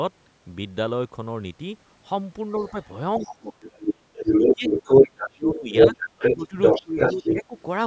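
Speech over a call path, with nothing above 8 kHz and the lowest bass trimmed, and from 2.55 to 7.62 s you can hear the other side's voice leaking through. It's loud, roughly 10 dB above the talker, most likely because the echo canceller left part of the loudspeaker playback in the mic signal. That same double talk seems to trip the canceller into speech suppression: the talker dips by around 30 dB at 3.19 to 3.65 s, then by around 15 dB at 4.38 to 5.02 s, 5.35 to 5.95 s and 6.35 to 7.54 s, losing level while both sides overlap.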